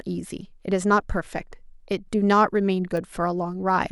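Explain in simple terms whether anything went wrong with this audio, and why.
A single sharp tick cuts through the speech at 2.97 s, a click with no connection to the voice around it. This is a bit error spike: one stored digital value flipped, making one sample jump suddenly and snap straight back.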